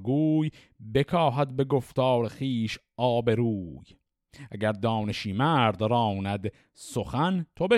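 No technical faults can be heard anywhere in the speech.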